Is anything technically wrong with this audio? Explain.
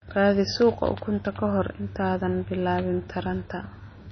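Yes. Throughout the speech, the sound is dull and watery, with nothing above 6.1 kHz and a swirling, chirpy edge on s sounds. The likely cause is MP3 compression at a bitrate low enough to fit about 24 kbps. Short of bits, the encoder cuts everything above a fixed treble limit and zeroes weak frequency lines, which then flicker on and off from frame to frame. That flickering produces the swirl, and attacks smear.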